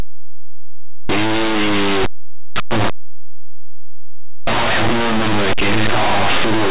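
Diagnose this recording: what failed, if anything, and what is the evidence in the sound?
The failure is at the sample-format conversion stage: linear audio read as companded, throughout the speech. The samples were written as plain linear 8-bit values and then expanded as mu-law codes. Small values just on one side of zero map to the largest mu-law outputs, so quiet passages and pauses jump to the loudest values while the other polarity stays small. The result is very loud, harsh distortion from start to finish. On the waveform, the trace is lopsided, with large excursions on one side. A spectrogram shows dense broadband energy smearing over the speech harmonics, even in gaps.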